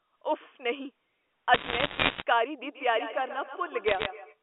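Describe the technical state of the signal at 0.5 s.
At 0.5 s the signal is intact, carrying the narrow telephone band of G.711 coding with nothing else disturbing it.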